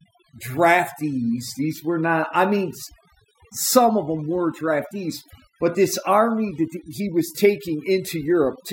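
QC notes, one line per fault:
Throughout: overdone noise removal. Aggressive noise reduction gates bands near the noise floor, leaving twinkling specks in near-silent gaps and taking quiet parts of the speech with them.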